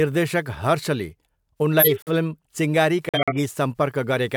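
At 1.79 to 2.10 s and 3.09 to 3.42 s, corrupt frames were muted: speech cuts abruptly to silence, then resumes on time, unlike a dropout that shifts timing.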